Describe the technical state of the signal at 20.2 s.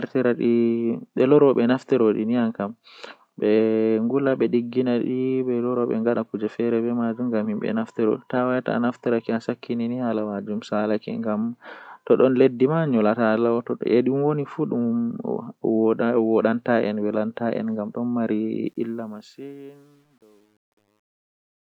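At 20.2 s the fade-out is passing through a gain stage that keeps only about 10 bits with no dither, causing truncation distortion on a fade from 18.66 s to the end. Here, in the worst stretch from 19.4 s, the speech sounds gritty and stepped.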